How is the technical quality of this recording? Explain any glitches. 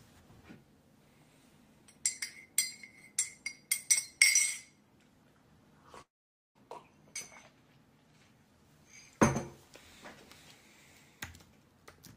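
One clear glitch interrupts the recording. From 6.01 to 6.58 s the audio breaks off: the last sound smears into a short, fading buzz or hiss, then about half a second of near-silence follows, and playback resumes with roughly 0.54 s missing. This is likely a long network dropout, where the receiver stopped getting audio and could only stretch the final sound before going quiet. Unlike a brief packet-loss glitch, the gap is long enough to hear as a hole, and the lost audio never returns.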